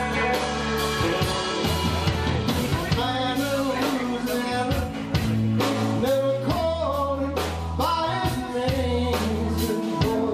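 No technical faults can be heard anywhere in the recording, and the signal carries through without any audible disturbance.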